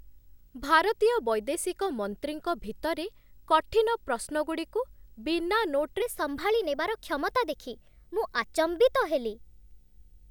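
A video or display buzz runs through the whole speech clip. It hums at 59.94 Hz, the picture's field rate, with hash above it. A faint whine at 15.7 kHz marks the line rate. It sits low, roughly 40 dB under the speech.

From 6.02 s to the end at 10.30 s, the section plays at the wrong speed. It runs 1.12 times too fast. Pitch rises about two semitones, and the voice sounds higher and hurried. Playback against a mismatched clock is the likely cause.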